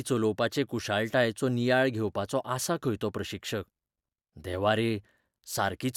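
No technical faults are audible in the recording.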